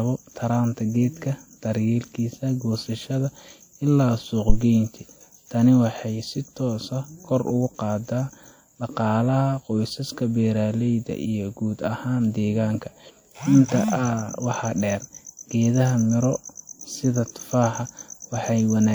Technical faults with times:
4.49-4.58 phantom power thump

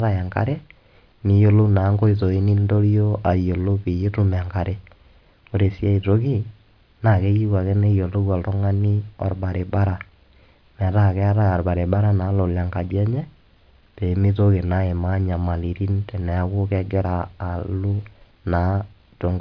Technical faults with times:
none

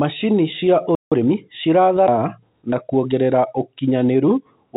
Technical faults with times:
0.95-1.12 playback stall
1.12-1.44 time-compressed catch-up
2.08-2.18 skip ahead
2.62-3.34 jitter buffer speed-up
4.05-4.72 jitter buffer speed-up

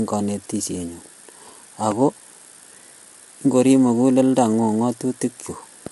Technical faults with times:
0.00-5.92 low-delay AAC compression

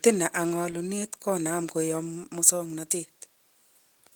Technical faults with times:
none

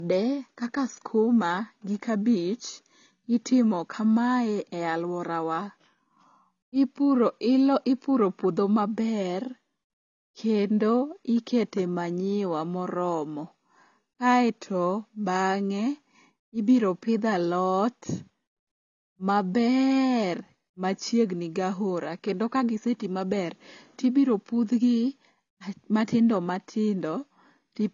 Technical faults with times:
0.00-27.93 low-bitrate audio saved at a high bitrate

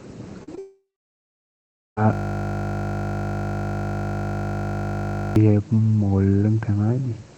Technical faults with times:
0.43-0.59 short concealed packet loss
0.59-1.98 long network dropout
2.13-5.36 system hang loop

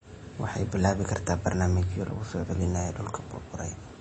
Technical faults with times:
0.00-4.00 MP3 compression

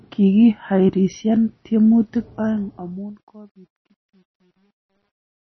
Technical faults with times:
0.00-5.52 MP3 compression
2.21-5.52 truncation distortion on a fade

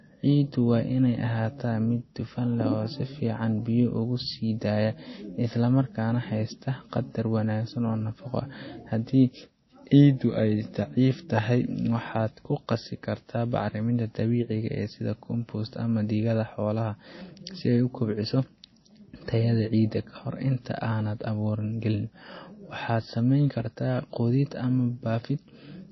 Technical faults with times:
0.00-25.91 MP3 compression

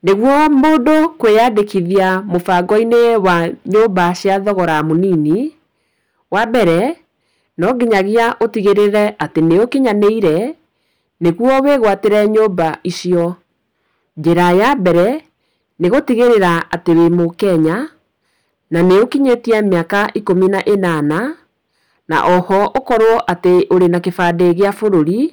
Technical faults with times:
0.00-25.33 hard clipping

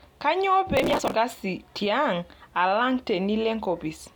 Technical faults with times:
0.77-1.14 processor overload crackle

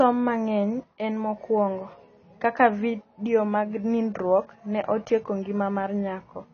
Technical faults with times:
0.00-6.54 low-bitrate audio saved at a high bitrate

